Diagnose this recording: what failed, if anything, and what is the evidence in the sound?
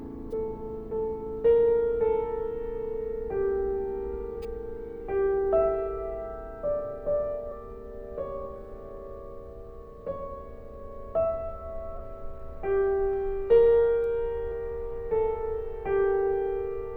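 Compressed frames were skipped at the codec, so the music jumps ahead roughly 70 to 150 ms at 0.30, 4.33, 7.51 and 11.95 s.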